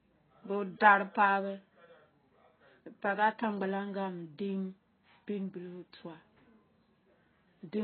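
From start to finish, the speech sounds dull and smeared. Nothing is heard above about 4.5 kHz. Sibilants turn fizzy and sustained sounds warble. The likely cause is heavy AAC compression, where the encoder discards high frequencies and coarsely quantises the rest, consistent with a bitrate near 16 kbps.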